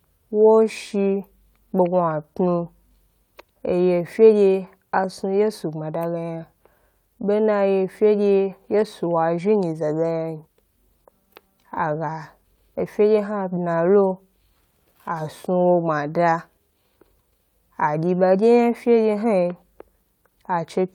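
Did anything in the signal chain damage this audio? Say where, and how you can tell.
No, nothing along the chain has left an audible mark on this speech recording, and the signal comes through intact with no stage standing out as having altered it.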